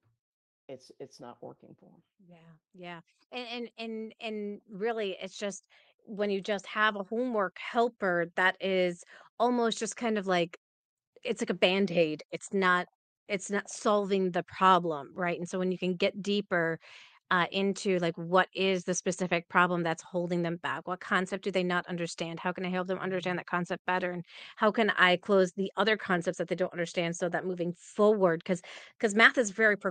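Right after "it's it's", around 1.19 s, there's automatic gain rising: the AGC decided the input was too quiet and cranked its gain up by about 13 dB over nearly eight seconds, so voice and background swell together until about 8.89 s, just before "almost just kind of".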